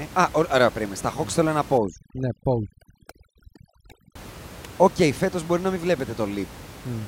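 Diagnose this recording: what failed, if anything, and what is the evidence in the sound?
The call-processing stage failed: overdone noise removal from 1.78 to 4.15 s, just after "ναι θέλω ένα". The suppressor, working against room noise about 18 dB below the speech, cut bands lying near its noise estimate, taking quiet speech detail too. The background drops and breaks up into twinkling specks.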